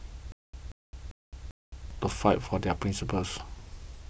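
From 0.32 to 1.91 s the speech catches on a 182 ms fragment that repeats four times, each time followed by about 214 ms of dead digital silence, a steady 396 ms cycle. This stutter with silent gaps likely comes from a stalled stream replaying its last buffer while new audio is lost.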